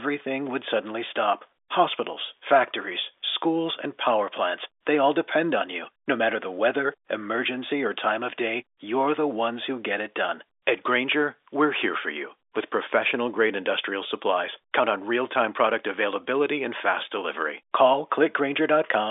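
Nothing in this speech recording stood out as a technical problem on listening.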